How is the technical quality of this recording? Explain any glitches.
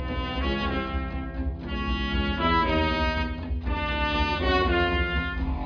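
No glitches can be heard anywhere in the recording. There is nothing that calls for an explanation.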